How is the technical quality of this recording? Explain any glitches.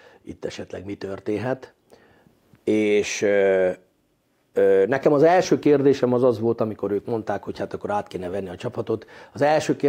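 No glitches or faults are audible.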